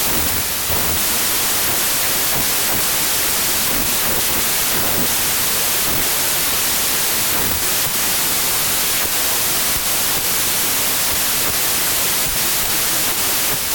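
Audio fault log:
Throughout, wrong sample width: harsh loud noise buries the sound, which plays at two-thirds speed and lower pitch, because packed 24-bit samples are read as 16-bit.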